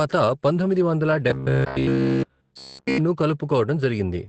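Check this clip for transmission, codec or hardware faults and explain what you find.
Two faults are audible.

Opus voice compression runs throughout. The coarse, low-rate coding fits about 12 kbps in SILK mode, removes everything above about 8.6 kHz, and leaves the speech muffled and hoarse.

Robotic sound from repeated short buffers occurs from 1.30 to 2.98 s. Speech becomes a rigid metallic buzz at 66.7 Hz, likely from a 15 ms buffer replayed continuously while fresh audio is skipped.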